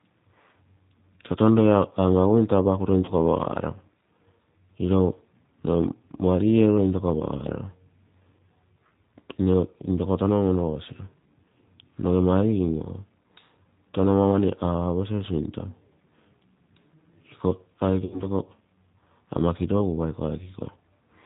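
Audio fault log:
Throughout: G.729 codec. The 8 kbit/s G.729A coding rebuilds the speech from a vocal tract filter, a pitch predictor and a few pulses per subframe, so nothing above 4 kHz survives and the speech sounds plainly rough and synthetic.
3.05–3.13 s and 18.05–18.23 s: VoIP packet loss concealed by the speech codec. About 30 ms and then 60 ms of audio are missing, which fits one and then two lost packets. The decoder extends its last pitch and filter state into a fading buzzy tone or coloured noise. The voice stays weak or distorted beyond each gap while the frame-to-frame prediction recovers.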